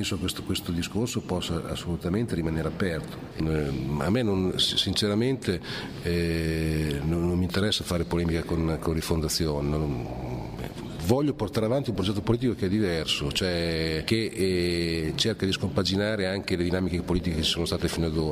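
No technical faults are audible anywhere in the recording.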